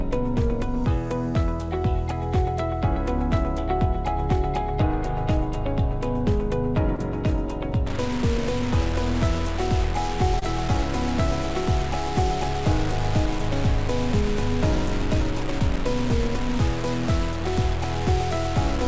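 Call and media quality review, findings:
Short concealed packet loss, 6.96–6.99 s: a quick smear lasting about 35 ms, where roughly 20 ms of audio never arrived in time and the decoder extended the last bit of sound to cover it before blending back. Worth a look at the network and jitter buffer.

Short concealed packet loss again, 10.39–10.43 s: the same kind of brief wobble over about 40 ms, with another 20 ms hole papered over by concealment.

From 7.87 s to the end, the sound turns gritty and grainy, and the grit moves with the signal. Quiet passages sputter or drop to nothing. The likely cause is low bit depth without dither: truncation down to something like 4 bits, with error sitting only about 15 dB under the signal. Wideband call path, nothing above 8 kHz.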